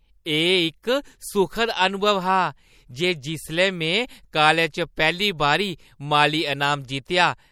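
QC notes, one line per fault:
Throughout: MP3 compression, likely at a low bitrate near 64 kbps; plainly audible watery, swirling artefacts as weak frequency components drop in and out between frames.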